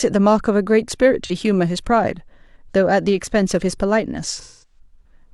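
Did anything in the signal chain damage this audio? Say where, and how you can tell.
Yes. The codec stage shows AAC frame loss with concealment. From 1.25 to 1.31 s, a 43 ms patch turns smeared, which fits one lost frame. From 4.40 to 4.79 s it lasts 213 ms, about five frames. The decoder fills each gap from the last good spectrum.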